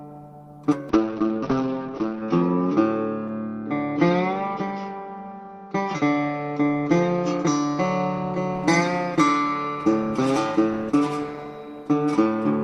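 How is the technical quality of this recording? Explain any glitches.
The recording has one clear problem, a call bitrate drop running from about 0.9 s to 8.59 s. The connection's bandwidth estimate fell, so the encoder had to squeeze the audio into far fewer bits, which fits a slide from roughly 32 kbps down to around 7 kbps. Coding gets coarse and rough, and the top end is cut from 20 kHz to 6 kHz, so everything goes muffled. It's at its worst for about 1.32 s before recovering.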